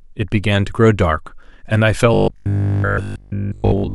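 A speech recording that turns into robotic sound from repeated short buffers from 2.14 s to the end. The voice becomes a rigid, metallic buzz locked at 50 Hz, still loosely tracking the words while most of the real audio goes missing. The likely cause is audio arriving too seldom, with a 20 ms slice replayed to fill the gaps. Mains hum sits under an intact voice, but here the buzz comes from the repeated slices themselves.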